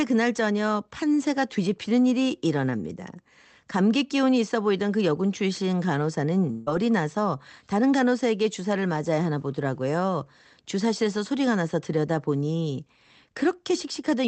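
At 6.51 s the speech cuts out and a short buzzy tail carries the last sound forward, fading over about 150 ms until it resumes at 6.69 s with roughly 160 ms never arriving. That's likely a long network dropout, with the receiver filling the hole. Throughout, the audio has the typical top-end limit of a WebRTC call path, with nothing above about 8 kHz, which fits an Opus stream at around 20 kbps.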